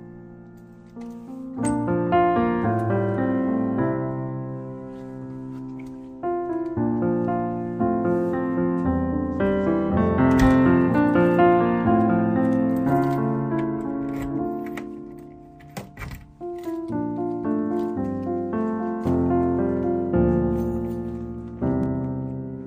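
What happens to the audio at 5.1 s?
Nothing goes wrong at 5.1 s; the audio runs through that moment intact, with no dropout, click, distortion or other fault to be heard.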